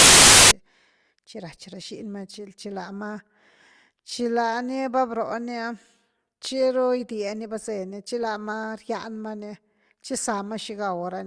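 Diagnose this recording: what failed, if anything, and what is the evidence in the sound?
The failure is at the storage and file-parsing stage: file tags played as audio. From 0.0 to 0.51 s, before the speech begins, there is a burst of very loud white noise with hard edges at both ends. The file's metadata block, here an embedded cover picture, was decoded as if it were samples, and compressed image data reads as random values. On a waveform it is a solid, loud slab; on a spectrogram, a flat broadband block from bottom to top.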